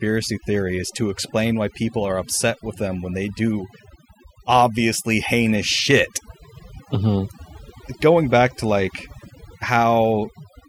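Overdone noise removal runs throughout the speech. A noise reducer set far too hard pulls down individual frequency bands whenever they sit near its noise estimate, taking quiet parts of the voice with them. The background drops and breaks up into twinkling specks.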